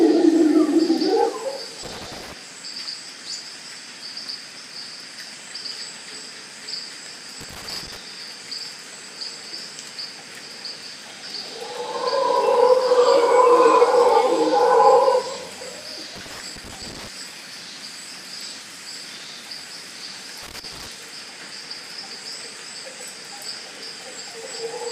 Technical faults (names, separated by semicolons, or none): loose connector crackle